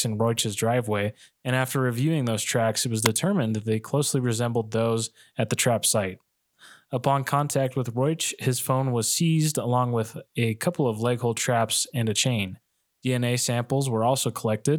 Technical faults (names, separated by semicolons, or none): wireless microphone squelch dropout